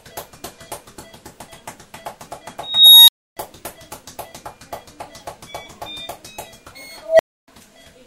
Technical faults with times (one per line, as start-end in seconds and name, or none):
2.62-3.37 unstable filter
7.02-7.48 unstable filter